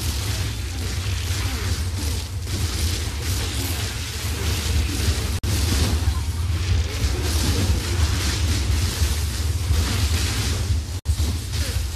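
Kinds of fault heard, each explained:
Gap at a join of encoded pieces: the audio was encoded as separate segments and joined without trimming, so each segment's encoder start-up delay and padded final frame remain as silence. Continuous sound drops out twice, from 5.39 to 5.44 s (about 48 ms) and from 10.99 to 11.06 s (about 60 ms). Each dropout has its edges smeared by the codec, and the sound then resumes where it stopped.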